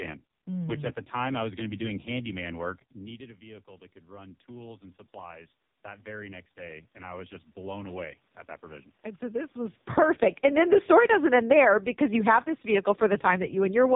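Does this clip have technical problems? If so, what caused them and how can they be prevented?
Yes. The whole clip has passed through the AMR narrowband mobile codec. Nothing above about 3.8 kHz survives, and the voice is heavily damaged: buzzy, synthetic and thin, with the room noise turned into a swirling warble. That degree of damage points to the lowest AMR-NB mode, around 4.75 kbps, where a few excitation pulses per 5 ms subframe cannot describe the voice or the background properly. To prevent it, carry the call over a wideband codec such as AMR-WB or EVS, or at least use a higher AMR-NB mode.

From 2.43 s to 9.48 s there is automatic gain rising. At about 2.5 s the talker moves away and the level at the microphone drops by about 18 dB. The automatic gain control then slowly adds about 13 dB, so the voice and the room noise swell back up together over several seconds. The room noise lifting with the voice is what gives the AGC away. 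To prevent it, keep the talker at a steady distance from the microphone or slow the AGC and cap its maximum gain.

From 9.82 s to 13.91 s there is automatic gain falling. At about 9.5 s the talker comes back toward the microphone. The input arrives loud against the gain that was raised earlier, and the AGC then pulls its gain down by about 6 dB. The voice starts hot and sinks gradually, and the background sinks with it. To prevent it, use a faster attack with a shorter gain memory, or use fixed gain with a steady microphone position.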